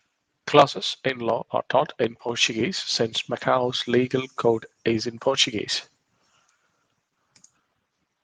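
Listening to this speech recording, nothing stood out as a technical problem.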